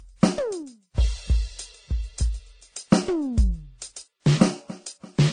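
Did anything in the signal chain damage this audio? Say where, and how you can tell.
Yes, codec stage: the music is cut off at 9.6 kHz throughout, with mixed artefact textures, not one codec's. This is likely transcoding between lossy codecs.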